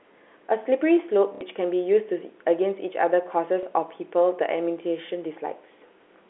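At 1.35 to 1.41 s and 3.63 to 3.66 s, packet loss with last packet repeated: the previous chunk replays, so the sound stutters at 1.35 s and gives a small blip at 3.63 s instead of going silent like a dropout.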